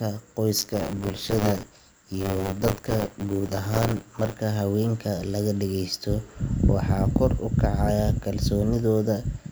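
From 0.58 to 4.34 s the speech carries a steady robotic 100 Hz rattle, the sign of buffer tearing. Writer and reader cross inside each period, so a small slice of every buffer repeats audio from about a lap earlier. Unlike dropouts, nothing goes silent, and the buzz follows the signal.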